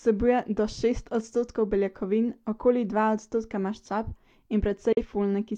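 A speech clip with a digital broadcast dropout from 4.93 to 5.03 s. The sound fades out in about 3 ms and goes silent. That points to a single corrupted frame, so the receiver muted until clean frames resumed. Speech sent during that gap is lost.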